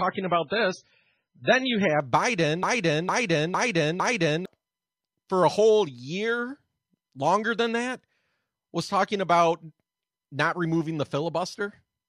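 For the first 2 s the speech sounds dull and swirly, with nothing above 9.3 kHz, then sharpens abruptly without any gap. This is an adaptive stream starting at a low bitrate, a heavily compressed version that fits roughly 16 kbit/s MP3, before the player stepped up to a far better version once it had gauged the connection.

From 2.63 s to 4.46 s a fragment of about 0.46 s plays four times in a row, identically, like a broken-record loop, and the speech that belonged there is gone. The likely cause is a stall upstream that kept resending the last buffered piece.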